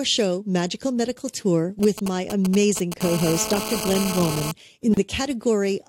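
From 1.83 to 3.01 s, GSM signalling bursts intrude on the speech. A nearby 2G phone's radio pulses are rectified, giving galloping ticks and brief 217 Hz buzzes, roughly 10 dB below the speech.

From 3.01 to 4.52 s, this becomes a steady GSM phone buzz as the phone enters a call. The raspy 217 Hz tone, rich in harmonics, sits about 7 dB below the speech.

At 4.94 s, a 32 ms gap at a join of encoded pieces opens. Separately encoded sections were spliced untrimmed, so silence cuts in before the speech resumes.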